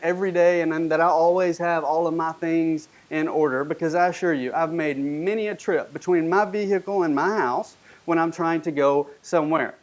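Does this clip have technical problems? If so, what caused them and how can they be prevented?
No, nothing stood out as a technical problem on listening to this speech, which passed through call microphone processing with nothing above 8 kHz.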